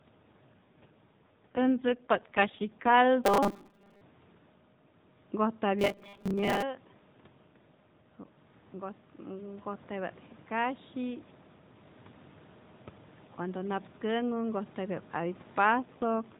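From 0.54 s to 2.97 s the speech turns rougher and more synthetic, with a buzzy, processed edge, though the bandwidth stays the same and nothing drops out. This is an AMR rate drop: the AMR narrowband codec, which elsewhere runs at 12.2 kbps with only light damage, falls to 5.9 kbps. Fewer bits go to describing the speech while more protect it against a weak radio link, so the vocal-tract model grows coarser.

Between 3.24 s and 4.01 s, and again from 5.79 s to 6.63 s, the speech becomes a rigid, metallic buzz pitched at 200 Hz that still loosely tracks the speech. This is robotic sound from repeated short buffers. The likely cause is audio arriving too seldom, so the playback fills the gaps by looping the last 5 ms fragment, which sets the fixed 200 Hz pitch. About half the audio is replaced in the first stretch and well over half in the second.

From 8.71 s to 11.3 s the speech and the room noise swell together, gradually. 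This is automatic gain rising. The talker's level had fallen by about 11 dB after moving away from the microphone around 6.5 s, and the gain control gradually added about 5 dB to compensate, lifting the background along with the speech.

At 15.64 s the AMR rate drop returns, again from 12.2 to 5.9 kbps, and the same rough, synthetic texture lasts to the end of the clip.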